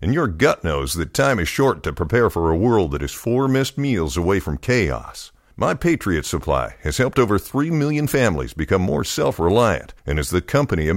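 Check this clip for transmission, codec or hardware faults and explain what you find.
One fault is audible in this speech clip. At 6.43 s there is a bit error spike. A single flipped bit corrupted two adjacent samples, jumping their value to about -22 dBFS before snapping back. It sounds like one sharp, broadband tick, unrelated to the speech around it.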